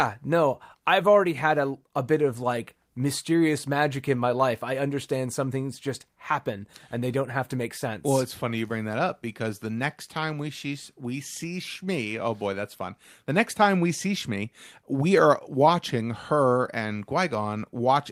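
No technical faults can be heard anywhere in this speech recording. Nothing in the signal path draws attention at any point.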